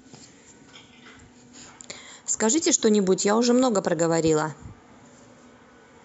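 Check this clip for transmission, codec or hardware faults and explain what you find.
No transmission, codec or hardware faults found here.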